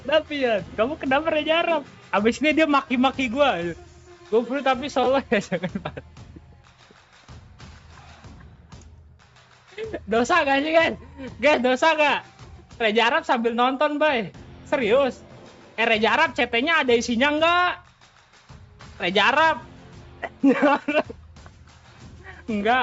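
No technical faults are audible in the audio, which carries the ordinary character of a call path, with the microphone processing trimming away the lowest bass and the call codec limiting the bandwidth to 8 kHz.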